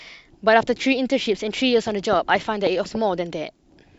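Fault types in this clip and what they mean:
Compressed frames skipped: at 2.86 s the speech jumps forward by about one compressed frame, roughly a tenth of a second, which fits a frame length near 93 ms that was lost from the file or rejected by the decoder as damaged. A spectrogram shows a sudden discontinuity in the harmonic traces, and the waveform envelope changes abruptly there.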